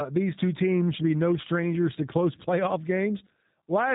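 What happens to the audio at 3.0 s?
G.729 codec coding runs through 3.0 s as it does across the whole clip: the speech is rebuilt from a vocal-tract filter, a pitch predictor and sparse pulses, a sound that fits 8 kbit/s, so it comes out plainly rough and synthetic, with nothing above 3.8 kHz.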